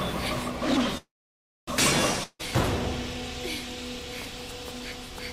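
A call audio freeze runs from 0.97 to 1.69 s. The last sound carries on briefly as a fading buzz, then about 0.61 s of silence follows, and the audio resumes where it stopped, now running about 0.7 s late. Likely the jitter buffer ran empty while packets were held up. A spectrogram shows a smeared, decaying tail and then a blank band; the waveform shows a flat line. A long network dropout follows at 2.23 to 2.41 s: a short fading fill and about 40 ms of silence, after which the audio returns with roughly 0.16 s permanently skipped. On the waveform this is a brief flat gap, and on the spectrogram the energy jumps abruptly across it.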